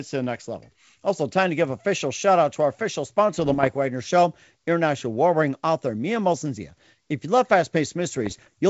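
From 3.39 to 3.70 s, bit errors on an ADPCM link break into the wideband speech. A fraction of a percent of bits arrive flipped. Each wrong bit throws off the decoder's step size and predictor, so the damage rings on for a few milliseconds. The result is a cluster of pops and rough, gritty bursts with brief level jumps. A second, slightly denser burst follows from 8.24 to 8.47 s. Around both, the G.722 coding stays clear.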